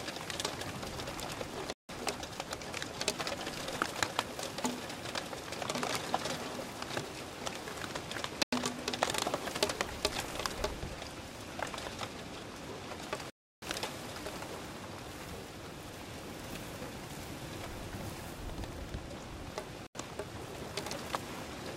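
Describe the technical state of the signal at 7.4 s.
At 7.4 s the signal is intact, with no audible dropout, clipping, distortion or other technical fault.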